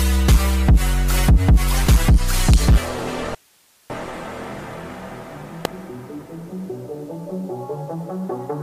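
At 2.54 s a sharp snap sits on top of the sound: an electrical switching spike, likely from a nearby switch, motor or static discharge arcing and being picked up by the audio line. It is a single brief transient added over the sound, not a break in it.

From 3.35 s to 3.90 s the sound cuts out abruptly for about 0.55 s and leaves only hiss, roughly 40 dB below the normal level, before returning just as abruptly. This is an audio dropout to a faint residue, likely a loss of the wanted signal while the path after the break stayed live and carried its own noise.

At 5.65 s a second electrical switching spike gives the same kind of sharp snap, a very short transient laid over the sound.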